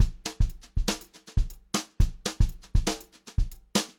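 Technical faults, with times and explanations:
Nothing technical jumps out here; there's simply no fault to point to in this one.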